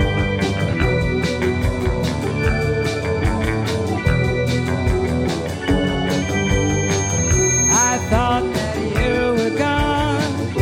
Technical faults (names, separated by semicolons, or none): loudspeaker feedback squeal